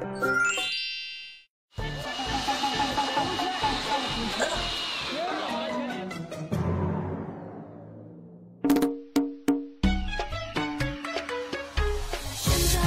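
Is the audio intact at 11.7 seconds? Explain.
Yes, the audio at 11.7 seconds is intact, with no dropout, click, distortion or other fault at that moment.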